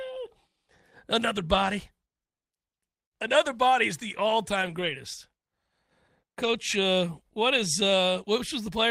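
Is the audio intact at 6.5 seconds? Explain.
No. From 6.43 to 6.53 s there is a lost packet rebuilt from error correction. Packets went missing, and the decoder filled them with the low-bitrate redundant copies carried in the following packets, Opus in-band forward error correction, so the speech never drops out. About 60 ms of the audio, which fits three packets, plays from those reduced copies, and it sounds audibly rougher and noisier than the surrounding speech.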